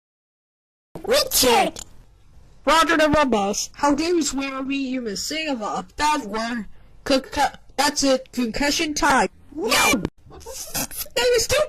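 The clip opens with a cut-off start: dead digital silence until 0.95 s, then the sound jumps in mid-stream with no natural attack, as if capture began late. At 1.44 s there's a single loud pop sitting about 15 dB above the audio, with double pops at 3.14 s and 9.85 s; a plug, switch or static discharge is the likely cause. From 3.97 to 5.07 s a call bitrate drop takes hold, falling from 48 to 10 kbps for about a second, so the top end collapses from 20 kHz to 8 kHz and the sound turns muffled and watery until it recovers.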